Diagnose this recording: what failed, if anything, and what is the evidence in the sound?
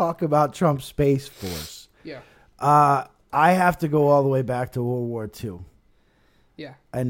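Nothing in this speech recording points to a failure at any stage of the chain. There is no audible evidence of a fault to trace, so no stage calls for attention.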